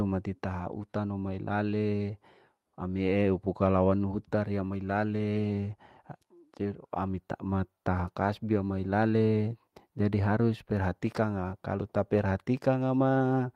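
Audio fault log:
No faults found on listening; the speech holds steady with no dropouts, gaps, glitches or level problems at any point.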